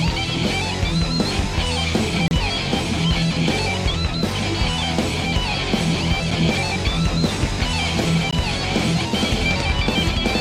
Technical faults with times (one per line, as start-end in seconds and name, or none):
2.28-2.31 gap between stream segments
6.31 gap between stream segments
8.31 gap between stream segments